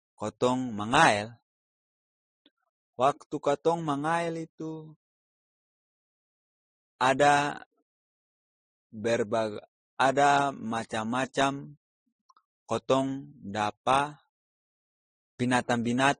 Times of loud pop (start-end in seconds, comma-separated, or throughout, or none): none